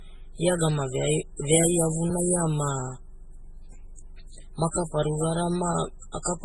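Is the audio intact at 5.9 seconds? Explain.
No. At 5.9 seconds the speech sounds dull and swirly, with nothing above 12.1 kHz and watery, smeared consonants. This fits transcoding between lossy codecs across the whole clip, likely a very low-bitrate MP3 pass re-encoded by Opus, which kept the earlier artefacts and added its own.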